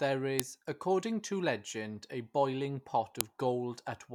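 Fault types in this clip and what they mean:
File header played as audio: leftover WAV header bytes decoded as samples, heard as sharp snaps near 0.40 and 3.21 s; waveform shows lone spikes, spectrogram thin full-band vertical lines.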